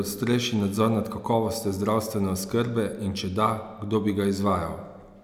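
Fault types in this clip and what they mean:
No faults are audible anywhere in this speech clip.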